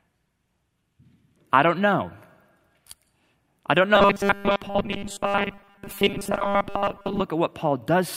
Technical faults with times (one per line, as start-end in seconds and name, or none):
3.95-7.22 robotic sound from repeated short buffers